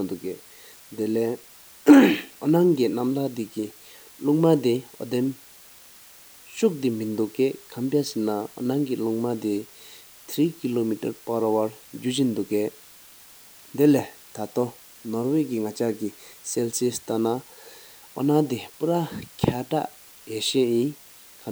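A speech recording carrying low bit depth with dither from start to finish: a constant, even hiss sits under the voice at roughly 25 dB below it, with no crunch or distortion. Dither added before coarse rounding turns quantisation error into steady white noise, which fits 8-bit resolution. A spectrogram shows a flat noise floor spread evenly across all frequencies, plainest in pauses, and the waveform never settles to a clean zero line between phrases.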